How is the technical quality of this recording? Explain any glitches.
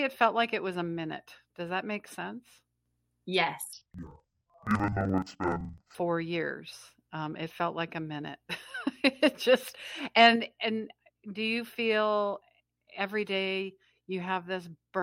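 The recording has one clear glitch. From 3.73 to 5.95 s, just before "years um it felt", interleaved audio is read as planar. Each 42.67 ms block, which fits a 2048-sample buffer, has its left and right samples split into halves and played at half speed. The speech drops an octave, doubles and chops at 23.4 Hz.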